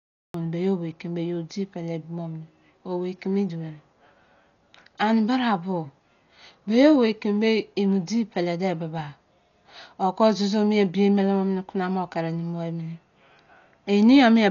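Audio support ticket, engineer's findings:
Cut-off start: digital silence from 0.00 to 0.34 s, then speech comes in abruptly at 0.34 s, already mid-sound. No natural attack, no fade-in. Capture or stream clearly kicked off late and chopped the front of the utterance. Check recorder arm/start timing or stream join logic.

Dolby Digital compression, likely cause: dull, band-limited speech throughout with nothing above 6.9 kHz, plus heavy rough, fluttery noise hanging around voiced tones. It points to a starved AC-3/E-AC-3 encode at around 40 kbps. The encoder cut the bandwidth and left many frequency lines without mantissa bits, so the decoder filled them with dither noise. Re-encode at a sane bitrate.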